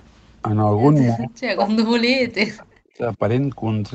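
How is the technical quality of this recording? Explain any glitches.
The recording has one clear glitch, a long stretch where the speech is pushed far down.

Speech suppressed in double talk, from 1.12 to 3.20 s: the level collapses for roughly two seconds, dropping very deeply, by around 40 dB at its worst, so the speech nearly vanishes. The likely cause is an echo canceller that heard both ends talking at once, could not tell the local talker from loudspeaker echo, and suppressed everything. Throughout the clip, the call path's 8 kHz bandwidth limits the top end.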